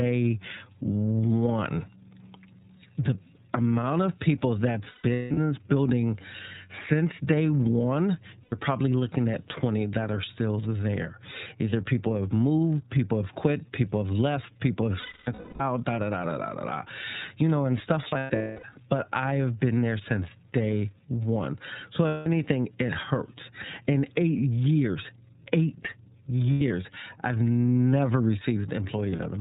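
The speech runs through the iLBC codec at about 13.3 kbps, coding each 30 ms frame on its own. Nothing above 4 kHz survives, so the sound is narrow, and the codec damage is plainly audible as a rough, slightly synthetic edge.

Lost iLBC frames follow. At 4.88 s, after "amount of people", 360 ms go missing in scattered bursts, the longest around 200 ms. Further losses come at 8.43 s (90 ms, before "probably looking at"), 15.00 s (540 ms, longest run near 300 ms), 18.08 s (450 ms, also near 300 ms), 22.08 s (180 ms, before "it hurts"), 26.52 s (90 ms) and 29.10 s (60 ms, brief scattered gaps). The decoder fills each gap by repeating the last pitch cycle with added noise, so it sounds like a held, buzzy vowel, fading over the longer losses, before clear speech returns almost at once.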